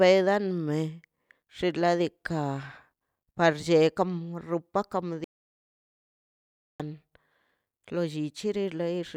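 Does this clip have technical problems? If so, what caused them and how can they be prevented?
Yes. The speech has an audio dropout to silence from 5.24 to 6.80 s, cutting out mid-flow and resuming abruptly after about 1.55 s. The gap is silent with no room tone, which sets it apart from a natural pause or a noise gate closing, where some background normally remains. The likely cause is that the input signal was lost, through a loose connection, a failed link or an accidental mute, while recording carried on writing silence. To prevent it, secure cables and wireless links, monitor input levels live, and keep a backup recorder running.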